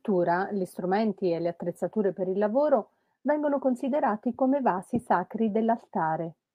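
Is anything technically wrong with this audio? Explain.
No, nothing technically wrong here.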